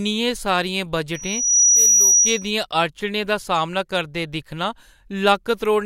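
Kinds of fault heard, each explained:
Loudspeaker feedback squeal: the microphone is picking up the loudspeaker it drives, and at about 5.8 kHz the gain around that loop goes above one, so that single tone feeds on itself. From 1.14 s it swells over roughly half a second into a piercing whistle that sits about 10 dB above the speech, then stops at 2.51 s. A spectrogram shows one bright horizontal line at 5.8 kHz across that span, and the waveform shows a dense, steady band overlaid on the speech.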